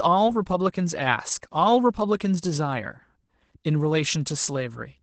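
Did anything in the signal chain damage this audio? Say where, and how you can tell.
Yes. The damage comes from the codec stage. Opus voice compression affects the whole clip. Nothing is heard above 8.7 kHz. The speech sounds muffled, hoarse and slightly robotic. That points to SILK linear prediction in wideband mode near 12 kbps, coding the excitation coarsely.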